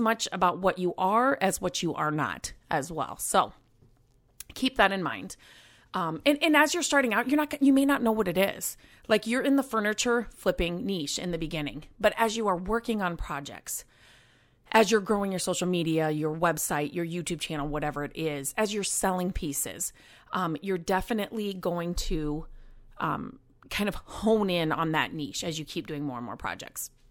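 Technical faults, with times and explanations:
No technical faults heard.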